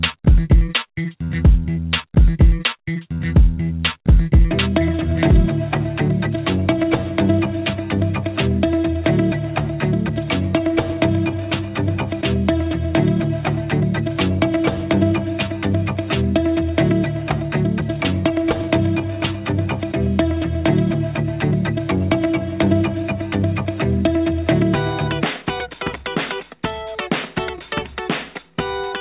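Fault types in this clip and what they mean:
Clock drift between sender and receiver: The sending end's audio clock runs fast, by around five percent, so more audio arrives than the receiver plays out in the same time. Its jitter buffer keeps filling, and the receiver has to keep discarding small pieces to stop the delay from growing. This is heard as a faint, recurring unevenness in timing throughout the clip, on top of a band-limited call sound with nothing above 4 kHz.
Repeated timing corrections: To keep pace with the faster sender, the receiver trims short fragments again and again from 0.16 s to 28.94 s. All the edits go the same way, removing rather than repeating, so the sound plays at about 104 percent speed overall. The cuts come at irregular intervals and each one is tiny. They show up as slight hiccups and a tempo that feels a little hurried and unsteady.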